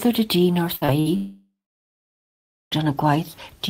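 At 0.75 to 0.83 s the last sound is held and fades over roughly 60 ms. This is a burst of packet loss: several consecutive packets arrived too late or not at all, and the decoder extended the last sound while attenuating it. When real audio resumes, about 60 ms of the original speech is missing rather than delayed.

At 0.85 to 0.90 s there is a short smear lasting about 25 ms. This is short concealed packet loss. Roughly 20 ms of audio failed to reach the decoder in time, and the receiver patched the gap by continuing the preceding sound and then cross-fading back into the incoming stream. The gap is brief, so it is heard as a brief wobble in the speech.

At 1.00 to 1.08 s a second burst of packet loss repeats the pattern of the first. A fading continuation of about 58 ms covers a hole of about 60 ms, and the speech picks up again further along with that stretch gone.

From 1.16 to 2.73 s the audio drops away for about 1.6 s. 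The last sound carries on briefly as a decaying tail, then about 1.2 s of silence follows. Speech returns at 2.73 s without the content from that interval. The cause is likely a long network dropout, in which the stream stopped arriving and concealment ran out before packets resumed.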